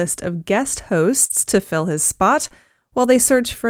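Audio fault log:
1.25 to 1.32 s and 2.48 to 2.52 s: short concealed packet loss. Sound went missing for 40 ms and then 20 ms, and the receiver covered each hole with roughly 42 and 24 ms of fill by stretching the sound just before it, then blending back into real audio. It comes across as a brief smeared, wobbling stretch rather than a silence. Unlike the error-corrected frames, this fill is guessed, not decoded, so it holds the previous sound's character instead of rougher real content.
1.30 to 1.32 s and 2.44 to 2.46 s: lost packet rebuilt from error correction. A single 20 ms packet was lost at each point, but the following packet carried a low-bitrate backup copy of it, which the decoder played in its place. There is no gap, just a 20 ms patch that sounds grainier and noisier than its surroundings. It follows the real sound rather than extending the previous one, which separates it from the concealment.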